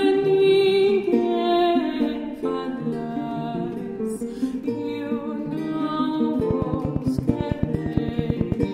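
From about 6.40 s to 8.64 s there's a train of clicks, roughly twenty evenly spaced ticks at close to 9 per second, peaking about 15 dB above the sound. It's likely electrical interference from nearby gear or a faulty connection or power supply.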